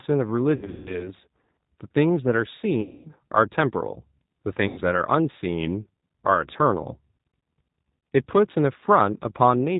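Throughout the speech, G.729 codec coding gives a plainly rough, synthetic quality. Nothing passes above 4 kHz, so the spectrogram shows a hard ceiling there. VoIP packet loss concealed by the speech codec occurs at 0.56–1.11 s (240 ms missing in scattered gaps, the longest 150 ms), 2.81–3.10 s and 4.68–4.82 s. Each time, the decoder stretches its last pitch and filter into a fading buzzy tone or coloured noise, which shows as a smeared, static spectrum and a decaying waveform envelope.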